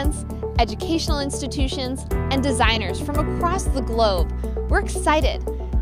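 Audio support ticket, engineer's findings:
No audible defects found on review of the full recording; playback path and capture chain show nothing to action.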